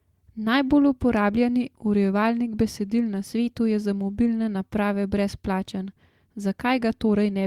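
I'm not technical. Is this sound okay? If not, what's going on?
Yes, nothing wrong can be heard in this recording.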